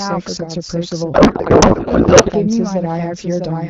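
Speech carries a doubled audio track throughout: a second full-band copy trails the original by roughly 0.7 s at about 5 dB lower. It has no decaying tail or added room colour, which sets it apart from echo or reverberation, and it likely comes from a second, slower capture path. From 1.14 to 2.32 s a codec payload misread takes over: octet-aligned AMR frames are unpacked as bandwidth-efficient, so the speech becomes garbled noise and warble that barely tracks it. This is unlike the light, clear-sounding AMR-WB coding at 12.65 kbit/s, and unlike the gaps left by lost packets.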